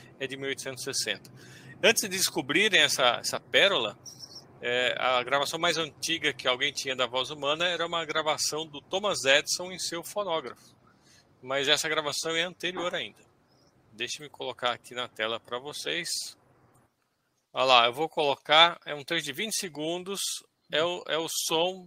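No technical faults can be heard anywhere in this clip.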